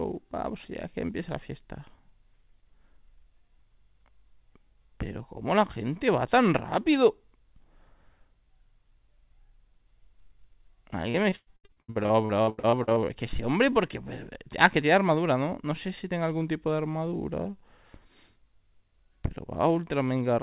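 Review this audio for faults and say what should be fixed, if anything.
From 11.1 to 13.06 s there's repeated packet loss with a robotic sound. Nineteen short gaps, the longest about 108 ms, are patched by stretching the previous sound, so roughly 40% of that stretch comes out choppy, on top of the 4 kHz band limit that fits a G.711 mu-law call path. A more stable network link or a deeper jitter buffer should prevent it.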